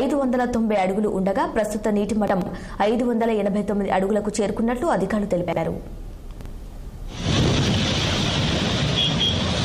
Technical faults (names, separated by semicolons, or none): chunks out of order